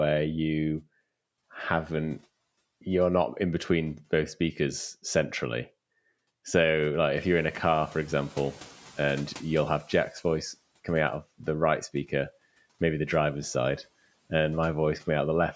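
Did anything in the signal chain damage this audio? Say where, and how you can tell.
Yes, at the call processing stage: the noise suppressor catching up. Room noise jumps by about 12 dB around 7 s. From 7.14 to 10.45 s it passes through under-reduced, then sinks by about 13 dB over 3.3 s, just before "coming out of the", as the noise estimate adapts.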